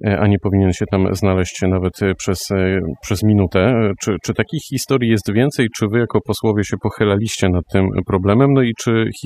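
Overdone noise removal runs through the whole speech clip. A noise reducer set too aggressively has pulled individual frequency bands down or out wherever they sat close to its noise estimate, taking quiet speech detail with them. Between phrases the background drops to near silence, dotted with twinkling specks. On a spectrogram this looks like scattered isolated blips in otherwise empty gaps, with patchy, holed harmonics in the speech.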